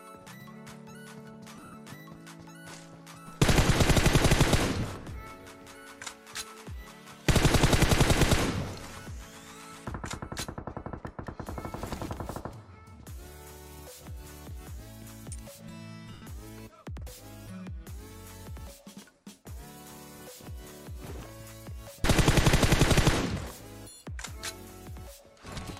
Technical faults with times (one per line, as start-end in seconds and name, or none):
1.56-1.74 lost LE Audio frames
4.80-4.83 lost LE Audio frames
16.13-16.22 lost LE Audio frames